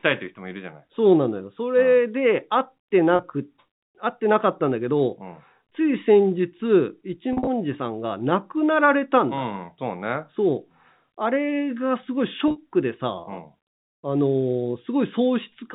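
Packet loss with pitch repetition at 3.16, 7.33 and 12.48 s: the receiver bridged 30, 110 and 70 ms gaps by repeating the last pitch period, so the speech briefly holds in a buzzy smear.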